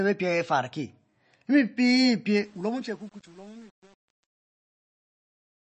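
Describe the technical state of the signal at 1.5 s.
At 1.5 s the speech shows MP3 compression damage, present throughout the clip. Nothing is heard above 8.3 kHz, and the remaining band sounds watery and swirly as weak frequency lines drop in and out. This is likely from a starved encoder, consistent with roughly 32 kbps.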